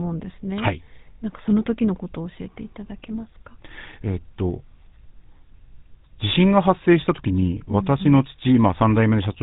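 From start to finish the speech has a buzzy, gravelly roughness with nothing above 4 kHz, the sound of the GSM full-rate codec. At about 13 kbps it rebuilds the voice from a vocal-tract model driven by sparse regular pulses, so fine detail turns coarse.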